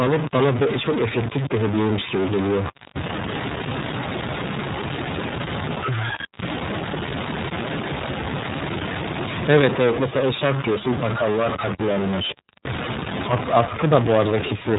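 A distortion rides on the speech from start to finish, and the pauses between phrases are not silent but filled with a gritty noise floor. That pairing points to a stuck bit, likely one data line held at a fixed value, so about half the samples are pushed off by that bit's weight. Near silence, small values flipping sign keep toggling the error, which is why the gaps hiss.

Across the whole clip the speech is also band-limited and synthetic, with nothing audible above about 3.8 kHz and a slightly rough, processed grain that is plainly audible. This is the iLBC codec at work, coding each 30 ms frame's excitation independently of the previous one. That trades naturalness for robustness, and the level of damage fits its 13.33 kbps mode. The missing top end makes sibilants dull.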